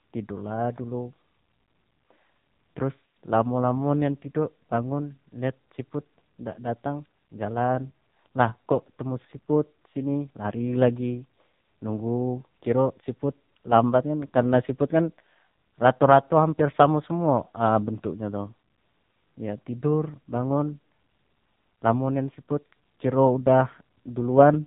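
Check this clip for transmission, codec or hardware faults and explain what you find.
One codec fault is present, and it runs through the whole clip. From start to finish the speech sounds thin, buzzy and synthetic, with nothing above 3.8 kHz. This is the AMR narrowband mobile codec. It rebuilds speech from a vocal-tract model driven by a few pulses per 5 ms subframe, and everything beyond the narrowband limit is discarded. The heavy, artificial buzz fits one of its lower modes, around 6.7 kbps, where too few bits remain to carry natural detail.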